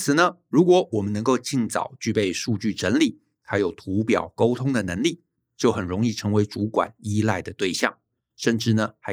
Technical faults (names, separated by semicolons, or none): none